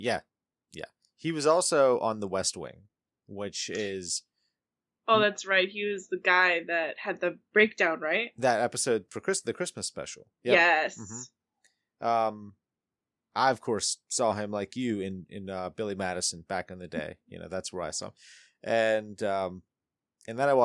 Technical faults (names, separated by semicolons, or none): none